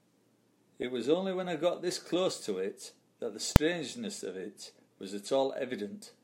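Invalid numbers at full scale at 3.56 s: a calculation went infinite or invalid, and the output was pinned at one extreme value, far beyond the speech's peaks, for a block of about 2.67 ms, which fits a 128-sample block. Because the block is so short, it comes through as one sharp bang in the speech.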